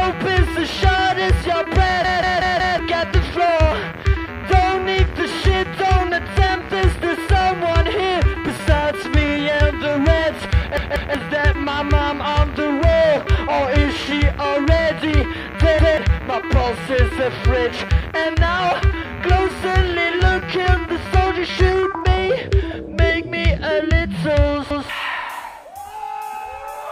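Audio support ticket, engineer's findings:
Repeated buffer, four events. 2.04–2.79 s: one ~186 ms segment played five times in total, hard join at each repeat, roughly 0.7 s of audio skipped. 10.77–11.15 s: two extra plays, about 0.4 s lost. 15.79–15.98 s and 24.71–24.89 s: single repeat each, about 0.2 s lost each. Probable playback device underrun. Segment length fits an 8192-sample output buffer replayed when fresh data missed its deadline.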